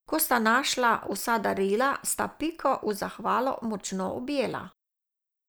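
No audible technical faults anywhere in the speech recording.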